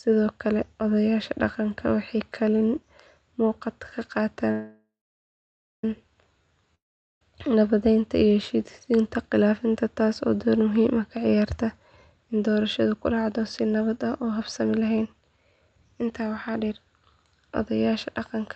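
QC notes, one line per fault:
4.51–5.84 s, call audio freeze: the last sound smears into a fading buzz, then about 0.9 s of silence, likely packets stalling; the audio resumes intact, just 1.32 s later.
6.75–7.22 s, long network dropout: a brief fading tail, then about 0.42 s of silence, and the audio picks up further on, with 0.46 s of it gone for good.
11.80–16.76 s, jitter buffer speed-up: the buffer trims tiny pitch-period slices over and over, so the speech runs at 111% with pitch unchanged, hurried, about half a second shaved off.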